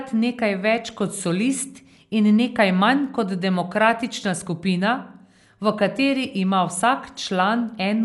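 From start to finish the speech has likely passed through Dolby Digital compression at a low bitrate, with damage consistent with roughly 64 kbps. The encoder has cut the band and left many frequency lines with no detail, so the decoder fills them with noise. Nothing is present above 11.5 kHz, leaving the speech dull and closed-in, and a rough, fluttering grain clings to voiced tones, plainly audible throughout.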